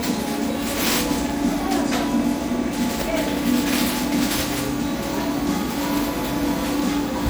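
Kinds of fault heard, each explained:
Generation loss: the sound is swirly, smeared and hollow throughout, with blurred attacks, likely from about four rounds of lossy re-encoding, which fits MP3 at around 96 kbit/s. The damage goes beyond what one encode at that rate would leave, as each pass piles on fresh noise and spectral gaps.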